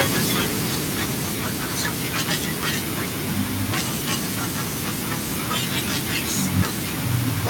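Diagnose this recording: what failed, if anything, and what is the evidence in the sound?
Automatic gain falling in the call-processing stage. From 0.05 s to 1.57 s the speech starts loud and then sinks by about 4 dB, with the background dropping along with it. The gain control judged the input too hot and gradually pulled its gain down.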